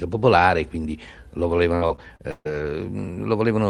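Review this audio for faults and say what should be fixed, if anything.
Right after "quindi lo", from about 1.75 s to 2.47 s, there's a run of repeated packet loss that gives the speech that choppy, robotic sound. Several short dropouts hit in quick succession, the longest about 140 ms. The receiver papers over each hole by stretching out the last bit of sound it had, so around 40% of that stretch is patched-over filler rather than real speech, and it comes out with chunks missing. To prevent it, give the call a steadier network path or a deeper jitter buffer, and turn on in-band FEC so single lost packets can be rebuilt instead of faked.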